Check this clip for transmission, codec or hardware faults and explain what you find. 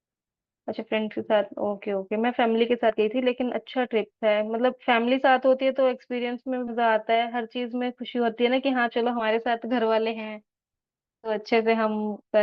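The clip has one fault type: compressed frames skipped. It occurs at 2.89 to 2.92 s, 6.67 to 6.72 s, 9.19 to 9.22 s and 11.23 to 11.30 s. Whole 20 ms codec frames never play, so the speech jumps ahead by a few frames each time.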